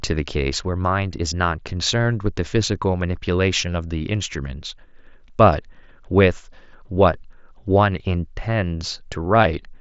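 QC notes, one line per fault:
No faults found in the speech. The Bluetooth mSBC headset codec path shows as a top end ending near 7.7 kHz, with a light grain on louder syllables.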